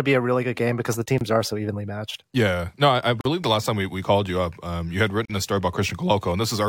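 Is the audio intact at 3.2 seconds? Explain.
No. A gap at a join of encoded pieces opens from 3.21 to 3.25 s. The speech drops out in a 43 ms gap with smeared edges, then resumes where it stopped. Untrimmed encoder delay and last-frame padding at the seam cause it.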